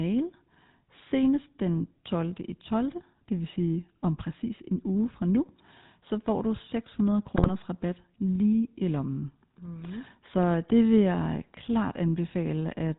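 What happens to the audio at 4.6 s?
At 4.6 s the speech carries GSM full-rate codec damage, present throughout: pulse-driven vocal-tract modelling gives a buzzy, gravelly roughness, consistent with 13 kbps, and the spectrogram shows nothing above 4 kHz.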